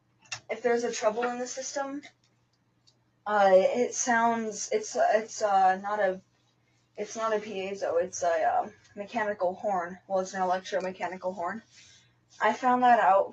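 Right from the start there's a speech-style noise suppressor applied to music or sounds, and it's left running for the whole clip. It treats anything steady, like held tones, ambience or reverb tails, as noise and pulls it down, while sharp attacks slip through. The level swings by around 20 dB, so the sound pumps and thins as the suppressor pulls steady parts down instead of holding its body.

On top of that general pumping, there are five spots where the sound gets cut by the noise suppressor harder than the rest. The first is 0.0 to 0.49 s, about half a second, down by up to about 18 dB. The next is 2.05 to 3.26 s, roughly a second, also about 18 dB. Then 6.2 to 6.98 s dips about 18 dB. A shorter, gentler one at 8.7 to 8.97 s goes down about 13 dB. The last is 11.61 to 12.4 s, about 18 dB. In each, the sustained or decaying material sinks away or has its tail chopped short, which sounds like the sound briefly ducking out.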